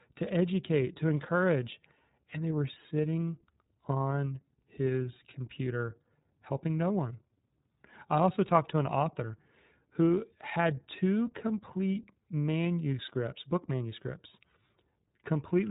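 iLBC codec, throughout the speech: the band stops at about 3.8 kHz, and each 30 ms frame is coded on its own, so the audio sounds plainly rough and synthetic, with a grainy texture that fits the codec's 13.33 kbps mode.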